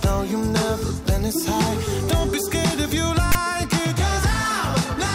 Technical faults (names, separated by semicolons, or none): file tags played as audio